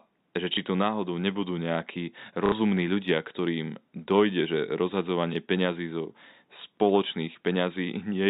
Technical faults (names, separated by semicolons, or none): packet loss with last packet repeated